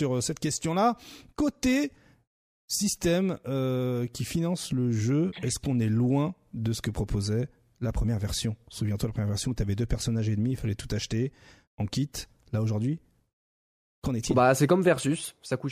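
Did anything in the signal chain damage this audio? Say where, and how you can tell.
No, nothing in the chain from capture to playback audibly damaged this speech recording.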